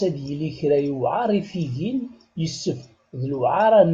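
No technical faults are audible.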